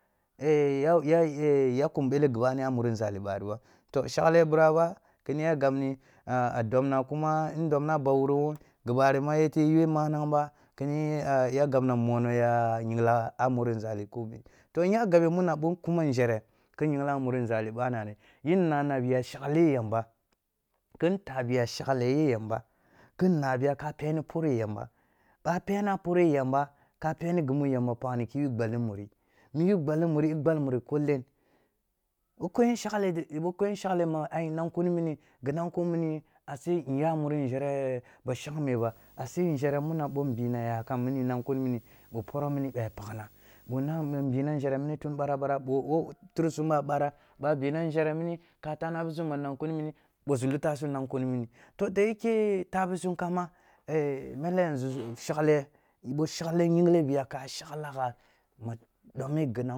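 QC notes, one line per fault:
38.77–44.24 s, video or display buzz: a 50 Hz field-rate buzz with hash above it and a 15.6 kHz line tone, around 30 dB under the speech, from screen or video cabling bleeding into the audio.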